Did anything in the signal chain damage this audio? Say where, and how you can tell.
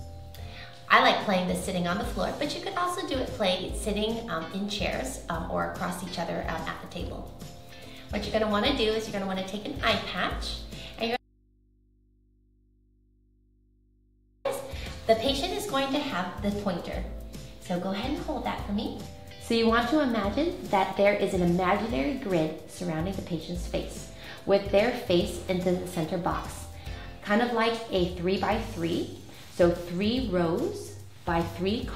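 Yes. Audio dropout to a faint residue, 11.17 to 14.45 s. Sound cuts abruptly to mains hum, about 35 dB down. Likely an open analogue input.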